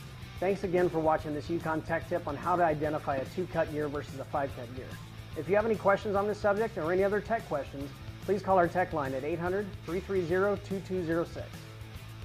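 From 0.0 to 6.0 s the adaptive stream is starting at a low bitrate: treble is thin and codec artefacts are strong, which suggests about 24 kbit/s Opus. At 6.0 s quality jumps gaplessly, fitting a 64 kbit/s step; a spectrogram shows the upper band suddenly filling in.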